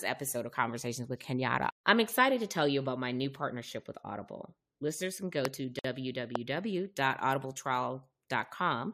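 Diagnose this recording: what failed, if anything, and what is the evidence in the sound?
Two loud pops sit on top of the speech, one at 5.45 s and another at 6.35 s, each about 20 ms long. The first peaks at about 20 dB above the speech and the second at about 15 dB. The talking carries straight on underneath both, so nothing was lost from the signal itself. This points to the analogue wiring stage, with the likely cause being a voltage step from a plug, a switch or static that the downstream circuitry turned into a sharp pulse.

There's also a gap at a join of encoded pieces, a 53 ms hole from 5.79 to 5.84 s. It has smeared edges, and the speech resumes right where it broke off. That's a codec and storage issue. The audio was encoded in 4-second pieces that were then stitched together untrimmed, so each join keeps the encoder's start-up delay and the padding on the last frame. Together those leave a short stretch of silence in the middle of continuous sound.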